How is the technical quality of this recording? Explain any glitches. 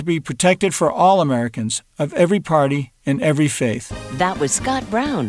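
Nothing here glitches or trips up; it runs smoothly the whole way, with no hiccups to explain.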